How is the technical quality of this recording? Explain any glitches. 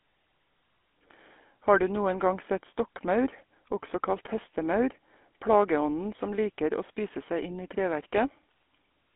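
The quality is poor throughout, because the whole recording has passed through the GSM full-rate codec. Nothing above about 3.8 kHz survives, and the band sits roughly between 250 Hz and 3.5 kHz. The codec models the vocal tract and drives it with a coarse train of regular pulses, which fits a 13 kbps phone channel. The result is plainly audible damage: a buzzy, gravelly roughness on the speech.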